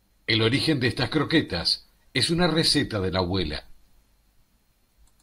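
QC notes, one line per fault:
No faults found on audition; speech path checked end to end with nothing to log.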